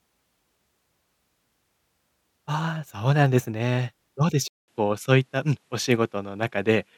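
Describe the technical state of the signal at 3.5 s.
At 3.5 s the speech signal is intact, with no dropout, clipping, glitch or other fault at that point.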